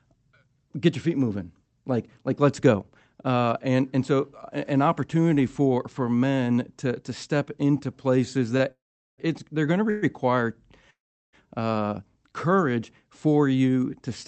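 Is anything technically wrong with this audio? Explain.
Yes, the speech has one short stall and three call audio freezes.

At 8.57 to 8.62 s comes a short stall from a late packet: the jitter buffer ran dry, so the receiver stretched the last sound by about 23 ms until the packet arrived. That syllable is held slightly too long, with a slight buzz or dip, and nothing is lost.

Call audio freezes occur at 8.72 to 9.20 s, 9.90 to 10.04 s and 10.90 to 11.35 s, likely from packets held up in transit that emptied the jitter buffer. Each time the receiver extends the last sound into a fading buzz or hiss, which decays to silence for about 410 ms in the first and 380 ms in the third. The 124 ms middle one never goes quiet. The speech then resumes where it stopped, delayed rather than cut.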